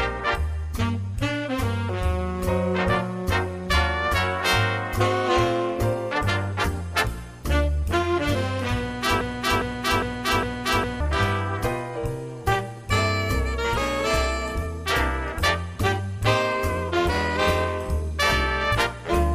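At 9.21 s a broken-record loop begins: a 0.41 s fragment repeats four times back to back until 11.0 s, identical each pass. The likely cause is a stalled player or stream resending its last buffer, so the sound that belonged there is missing.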